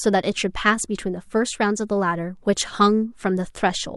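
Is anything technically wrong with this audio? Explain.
No, nothing technically wrong stood out on listening to this speech recording.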